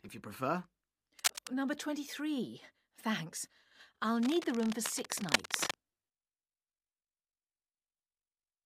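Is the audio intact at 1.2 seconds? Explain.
No. Cable scratch noise runs from 1.19 to 1.48 s, covering the moment asked about. The likely cause is a worn cable, connector or control being moved, so its contact resistance flickers rapidly and injects dense, irregular bursts of noise into the signal. For those three tenths of a second a scratchy, rustling crackle sits over the audio at roughly the same loudness as the sound itself, so it is clearly audible rather than buried.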